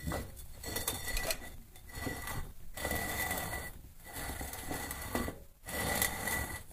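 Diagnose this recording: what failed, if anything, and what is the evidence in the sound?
Overlap between stream segments at playback: overlapping timestamps trimmed 39 ms at 1.58 s and 37 ms at 5.57 s, 4 s apart, leaving abrupt waveform jumps.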